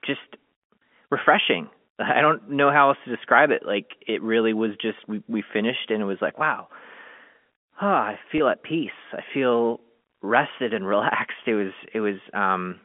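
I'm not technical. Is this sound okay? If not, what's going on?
No. At 8.38 to 8.40 s, just before "at peace I feel", a moment of audio was lost in transit and the receiver filled the gap by briefly repeating the last bit of sound. That is packet loss with pitch repetition, heard as a tiny held, buzzy blip.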